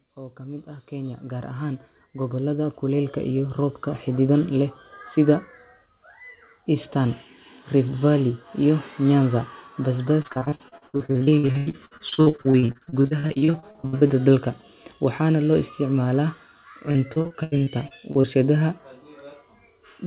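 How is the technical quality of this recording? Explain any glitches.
The recording has two kinds of fault: a gain swell at the start and two stretches of choppy, robotic dropouts. Throughout, the sound is narrowband with nothing above 4 kHz, which fits a telephone-grade codec such as G.711 on a call path.

From 0.15 to 4.41 s, automatic gain rising lifts the level by about 15 dB. The gain control judged the input too quiet and turned itself up gradually. Unlike a speaker moving closer, the background noise swells along with the voice.

Repeated packet loss produces the robotic sound from 10.22 to 14.12 s and again from 16.91 to 18.27 s. Audio packets kept going missing, and each hole was patched by extending the preceding sound. About 43% of the first stretch and 27% of the second is concealed this way, with individual gaps up to about 90 ms. The choppy repetition sets it apart from plain silent dropouts or codec hiss.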